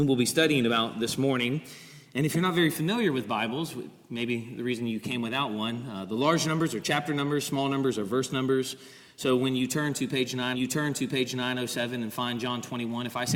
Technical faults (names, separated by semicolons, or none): stream segment repeated